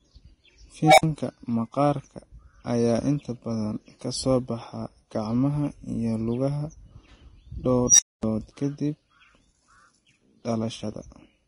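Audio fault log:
throughout: low-bitrate audio saved at a high bitrate. Smeared, warbly artefacts and a dulled top end persist despite the 256 kbit/s MP3 container, likely from an earlier Vorbis encode near 30 kbit/s. Unlike ordinary low-bitrate coding, the large file conceals damage it cannot repair.
0.83–1.03 s and 7.87–8.23 s: unstable filter. A tone, near 700 Hz and then near 5 kHz, swells by itself over about 150 ms and 120 ms until it clips, then falls silent for about 55 ms and 240 ms before "maqaarka ayaa inta badan" and "ka dib". The self-growing squeal ahead of each gap marks runaway feedback, not a plain dropout.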